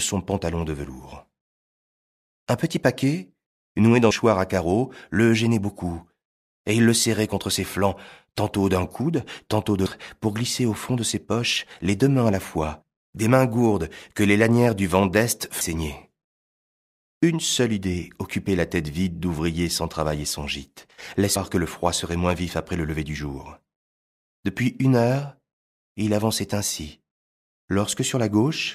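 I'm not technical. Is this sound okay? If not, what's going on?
No. Audio missing between chunks at 4.11, 9.86, 15.61 and 21.36 s: the speech skips about a third of a second each time, likely where the recorder switches between six-second chunks.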